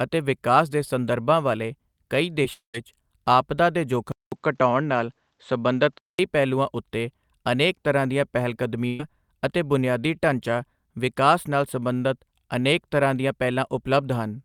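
Speech, with four distinct faults. At 2.43 s there is a tiny smear or wobble, a short concealed packet loss: about 10 ms of audio never arrived in time, and the receiver covered the hole with roughly 7 ms of continued sound before blending back, so a brief sliver of the speech is blurred rather than cleanly heard. Just after, from 2.53 to 2.75 s, the sound stretches into a fading buzz or hiss and then goes silent for about 120 ms before speech resumes further on. This is likely a long network dropout, in which around 210 ms of audio was lost and the receiver extended the last sound until it died away, leaving a jump where that stretch should be. From 4.12 to 6.19 s the sound turns duller and narrower, with nothing above 7.9 kHz and a faint new background noise well below the speech, while the loudness stays about the same. A 200 ms silence marks the switch. This is likely the input switched to a poorer device, a lower-bandwidth microphone or headset profile with its own tone and noise, before the original input returns. 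From 8.87 to 9.00 s the speech briefly freezes into a held, fading sound with no silent gap. This is a burst of packet loss: about 120 ms went missing in a row, the receiver filled it by continuing and turning down the last sound, and the audio picks up further along with that portion gone.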